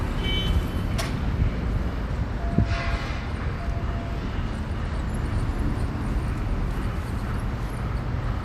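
At 5.09 s, compressed frames are skipped. About two 24 ms frames never reach the output, so the audio jumps forward by roughly 50 ms. Unlike a dropout, there is no silent gap.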